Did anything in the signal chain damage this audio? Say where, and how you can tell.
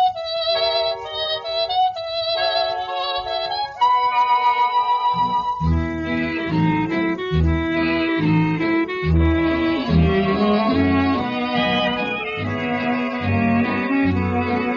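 No, no signal-chain damage found.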